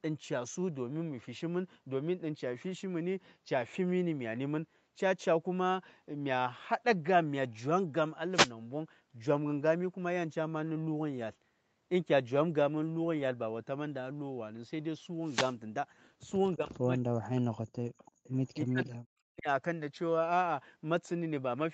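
At 8.31–8.52 s and again at 15.21–15.56 s, a wireless microphone noise hit brings a brief swish of static as the FM radio link fades. Hiss rises over the speech rather than the level dropping, which separates it from a codec dropout.

From 16.56 to 18.04 s, and again from 18.64 to 19.48 s, the speech is suppressed in double talk. The talker's level falls, by about 40 dB at its deepest. The likely cause is an echo canceller turning its own talker down while the far side speaks. Unlike a network loss, the sound is attenuated rather than replaced by gaps or filler.

Around those stretches, an echo leak appears at 18.05–18.29 s, 18.46–18.51 s and 18.84–18.88 s. These are faint scraps about 30 to 35 dB below the speech, trailing it by 330 ms, most likely residual loudspeaker pickup that the canceller missed. The fixed delay marks them as echo rather than room reverberation.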